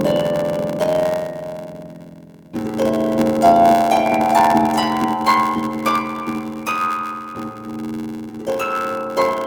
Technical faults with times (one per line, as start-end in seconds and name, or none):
0.00-9.46 block size mismatch (padded)